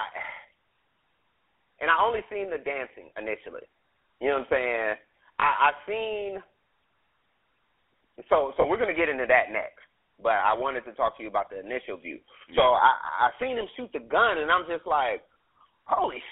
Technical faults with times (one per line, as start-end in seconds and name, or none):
0.00-16.32 GSM full-rate codec
5.40-5.44 lost GSM frames
8.62-8.66 lost GSM frames